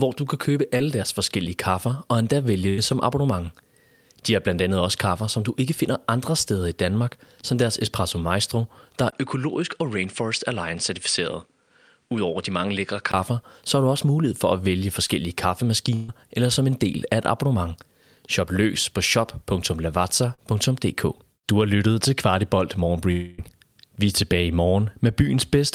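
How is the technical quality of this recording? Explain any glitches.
The speech is marred by a series of network glitches and one change of input device.

Short concealed packet loss occurs at 0.77 s, 15.08 s and 20.34 s. Each time, roughly 20 to 40 ms of audio failed to arrive in time, and the decoder patched the hole by extending the preceding sound, pitched if voiced or as shaped noise if not, before crossfading back. The patches last about 20, 12 and 36 ms and come across as a brief smear or wobble, with a consonant sometimes lost.

Bursts of packet loss hit at 2.69 to 2.80 s and 15.95 to 16.10 s. Here about 80 ms and then 140 ms went missing in one run. The receiver stretched the last sound across the gap while turning it down, so a voiced sound becomes a held buzz and anything else a fading hiss. The second burst is filled almost entirely, with no silent stretch. Playback resumes further along, and the audio in between is simply gone.

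From 9.10 s to 13.14 s the character changes, most likely because the input switched to a poorer device. A gap of about 20 ms marks the switch. After it, nothing is present above 9.8 kHz, the level drops by roughly 5 dB, and a new noise floor sits around 55 dB below the signal. The result is duller and boxier until the original tone returns at 13.14 s.

A long network dropout, the likely cause of the break at 23.12 to 23.40 s, removes about 260 ms. Concealment covers the whole span with a continuation of the last sound that fades as it goes, leaving no fully silent stretch, before the audio resumes past the missing section.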